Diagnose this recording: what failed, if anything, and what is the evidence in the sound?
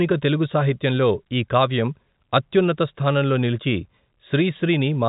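Nothing in this recording failed.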